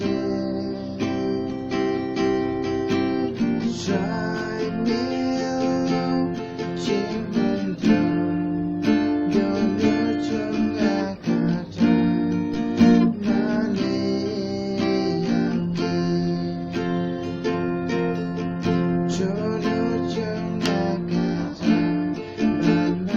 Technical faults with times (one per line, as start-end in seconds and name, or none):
12.54 DC step